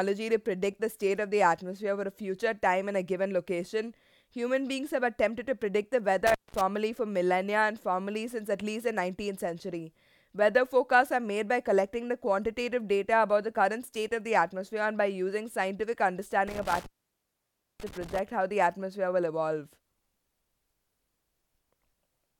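At 6.27 to 6.61 s, and again at 16.48 to 18.19 s, the speech drops out with crackle at each edge and only faint hiss in the gap, for about 0.2 s and then 0.93 s. This is intermittent contact: a loose cable or plug briefly opening the signal path.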